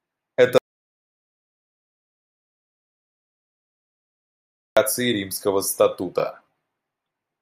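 An audio dropout to silence runs from 0.58 s to 4.77 s. The speech cuts off abruptly mid-flow and is replaced by about 4.19 s of silence, with no room tone or background hiss underneath, before the speech returns just as suddenly. The input signal was likely lost upstream, through a disconnected device, a failed link or a stray mute, while the recorder kept writing silence. Whatever was said during that stretch is gone.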